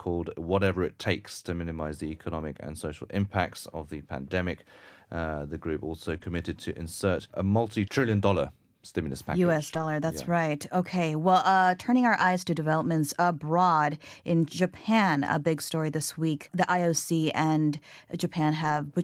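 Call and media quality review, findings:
Short concealed packet loss, 6.17–6.22 s: brief smear and wobble in the speech, a short sound possibly swallowed. Receiver jitter buffer/decoder concealment: about 20 ms of audio arrived too late, and the gap was bridged by extending the preceding sound, then cross-faded back into real audio.

Lost packet rebuilt from error correction, 6.22–6.24 s, 9.70–9.84 s, 12.20–12.22 s, 18.64–18.78 s: no gaps, but momentary roughness and added noise, longest at 9.70 s and 18.64 s (80 ms each). Decoder substituted low-bitrate in-band FEC copies carried in following packets. Durations fit a single lost packet at 6.22 and 12.20 s, four separate ones at 9.70 and 18.64 s.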